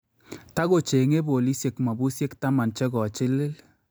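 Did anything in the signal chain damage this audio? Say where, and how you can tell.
No, nothing in the signal chain audibly damaged this speech, so there is no stage to point to.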